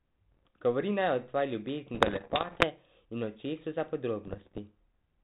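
Bit errors on an ADPCM link turn up three times in this speech: lightly from 0.32 to 0.50 s, worst from 1.94 to 2.65 s just after "naj o tvoji", and moderately from 4.27 to 4.59 s after "očesu za". Each flipped bit throws off the decoder's step size and predictor, so the damage rings on as pops and gritty bursts with quick level jumps. The band-limited sound underneath fits a 32 kbit/s G.726 path.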